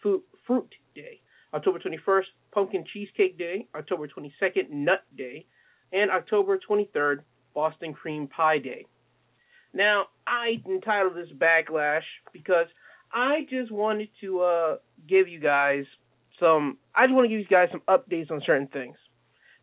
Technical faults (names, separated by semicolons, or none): none